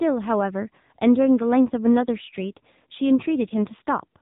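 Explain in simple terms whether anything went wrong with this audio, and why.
Something did go wrong, for the whole clip: the speech has been through the AMR narrowband mobile codec, the old phone-call squeezer. Nothing above 4 kHz survives, so it sounds muffled and boxy, and heavy squeezing leaves the voice buzzy and synthetic throughout.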